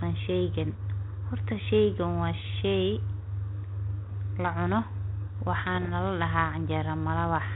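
Pops and short rough bursts with brief level jumps break in at 4.05 to 4.12 s and again at 5.74 to 5.90 s. These are bit errors on an ADPCM link: a fraction of a percent of flipped bits knocks the decoder's step size and predictor off track, so each error rings on for milliseconds.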